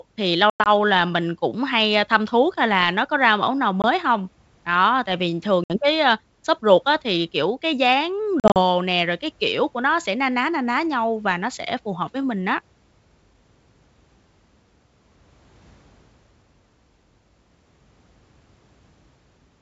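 Packet loss on an ADPCM call breaks the speech four times: after "thì lâu" at 0.50–0.68 s (120 ms missing, scattered over 160 ms), at 3.82–3.85 s (20 ms), after "tại vì thường" at 5.64–5.77 s (60 ms), and after "thì kiểu cái dáng" at 8.40–8.60 s (100 ms in short runs). Each hole is hard-edged silence. What separates this from plain dropouts is the recovery: the decoder's predictor and step size have lost track of the sender, so sound resumes with a click, wrong level or brief distortion before settling.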